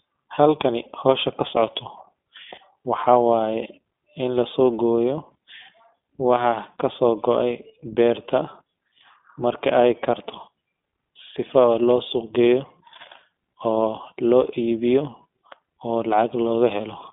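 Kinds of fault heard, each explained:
iLBC codec: The speech runs through a narrowband VoIP codec that codes each 20 ms frame's excitation on its own, which fits iLBC at around 15.2 kbps, and the damage is plainly audible as a rough, slightly synthetic edge. A spectrogram shows energy confined to roughly 200 Hz to 3.5 kHz with nothing above 3.7 kHz.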